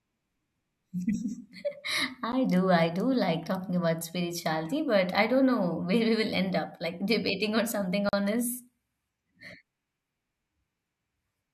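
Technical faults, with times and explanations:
2.32 s, block of digital silence: the program likely failed to refill its output buffer in time, so about 10 ms of samples came out as zeros just before "do I do like". The sound drops straight to nothing and back with no fade, heard as a single sharp tick.
8.09 to 8.13 s, block of digital silence: likely the same underrun left a longer 40 ms run of zeros after "debating or something". Its length makes it a brief audible hole.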